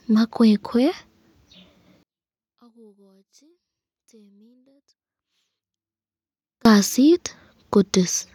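From 2.03 s to 6.65 s the speech drops by about 38 dB to a faint residue. The likely cause is one channel inverted: with reversed polarity, the centred signal cancels when summed to mono. The waveform shrinks to a near-flat band and the spectrogram nearly empties.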